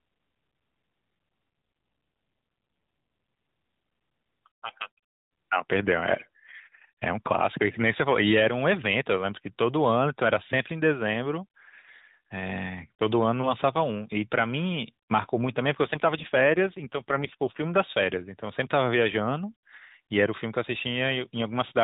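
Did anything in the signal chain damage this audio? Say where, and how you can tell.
Yes, at the codec stage: the mobile network twice forced an AMR rate drop, from 1.50 to 3.44 s and from 15.84 to 17.68 s. The speech turns buzzier and more synthetic with no gap and no change in the narrowband 4 kHz ceiling, which fits a step down from 12.2 kbps to about 5.9 kbps.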